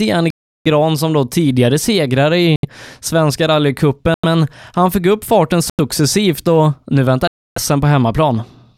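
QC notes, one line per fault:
0.30–0.67 s, 2.56–2.65 s, 4.14–4.24 s, 5.70–5.80 s, 7.27–7.58 s: Bluetooth stall. The speech drops to silence for 352, 72, 94, 91 and 289 ms, ending before "som då tidigare segrare", after "fick upp farten" and after "och nu", then resumes. The likely cause is interference delaying packets until the headphone buffer ran empty.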